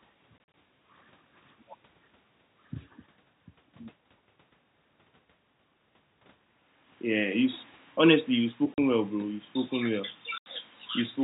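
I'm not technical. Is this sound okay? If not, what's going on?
No. The speech drops into brief dead silences: several short gaps between 0.38 and 0.54 s, one at 8.74 to 8.78 s, and another at 10.38 to 10.46 s. This is packet loss filled with silence: chunks of audio never arrived, and silence was played in their place.

From 7.08 to 9.15 s, the speech and the background sink together, getting gradually quieter. That is automatic gain falling: the system decided the input was too loud, or its background noise too strong, and slowly turned it down.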